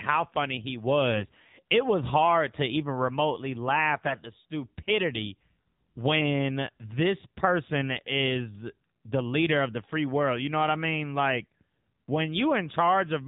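Throughout the clip the speech carries plainly audible AMR narrowband mobile codec damage. Nothing above 4 kHz survives, and the low-rate vocal-tract model leaves a buzzy, synthetic edge on the voice, which fits AMR-NB running at around 7.4 kbps.

From 4.08 to 4.20 s, between "to even remotely laugh" and "the stupidity when this", AMR bit errors corrupt the decoded speech. The span points to about five 20 ms frames arriving with a few percent of weakly protected bits flipped, misplacing excitation pulses and skewing fine gain and spectral values. The voice turns briefly hoarse and gargly.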